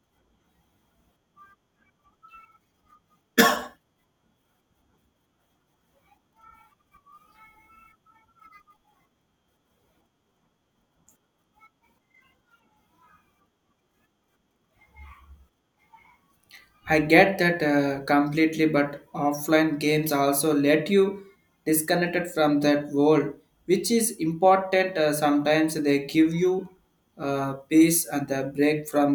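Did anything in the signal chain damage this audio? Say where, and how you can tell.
No, nothing in the chain leaves an audible mark on this speech at any stage from capture to playback.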